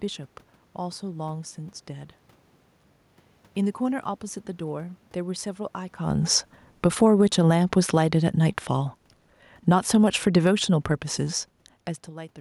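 A speech clip with two automatic gain faults. From 6.0 s to 11.48 s the automatic gain falls, pulling the level down by about 8 dB, so the voice and the room noise behind it sink together. Inside that stretch, from 7.1 s to 8.33 s, the automatic gain briefly rises by about 3 dB, swelling voice and background as one. The level shifts around 6 s and 11.5 s are just the talker moving relative to the mic.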